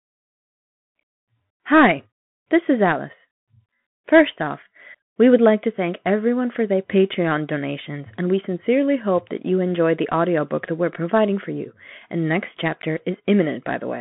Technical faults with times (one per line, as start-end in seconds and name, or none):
0.00-14.00 Bluetooth CVSD headset codec